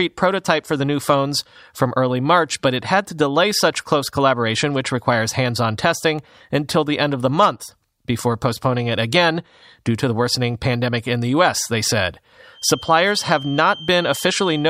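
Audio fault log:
12.50–14.69 s, feedback whistle: Right after "they said", a thin tone at 3.1 kHz appears behind the speech and holds to the end of the clip, swelling and fading slowly. It sits well below the speech, about 15 dB down. The likely cause is a loudspeaker-to-microphone loop sitting just at the edge of feedback. One high frequency keeps recirculating without building up. That is why it sounds like a thin whistle at one pitch rather than a howl.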